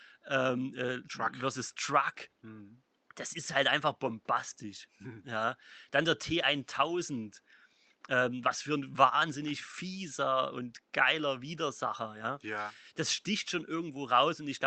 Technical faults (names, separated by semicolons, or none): none